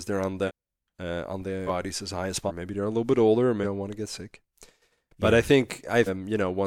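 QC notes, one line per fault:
0.47 to 6.06 s, compressed frames skipped: The audio jumps ahead at 0.47, 1.66 (between "uh on" and "as high as"), 2.47 (between "as high as" and "maybe they're a little"), 3.63 (after "little bit older or") and 6.06 s. Each jump drops whole 42.7 ms frames, from about a third of a second up to about a second of material.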